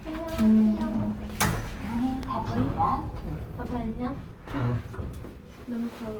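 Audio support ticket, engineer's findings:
Grainy, rough texture across the whole clip, 0 to 6.2 s. Tonal parts turn noisy rather than swirly. Bands sound filled, not hollow. Top end stays open, with content reaching about 20.2 kHz. Likely cause: Opus compression in its fullband CELT music mode. Band energies are kept, but starved bands are refilled with folded or noise content. Damage plainly audible, which fits a bitrate around 24 kbps.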